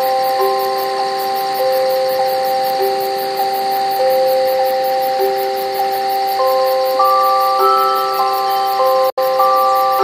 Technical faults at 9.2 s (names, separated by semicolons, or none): Bluetooth dropout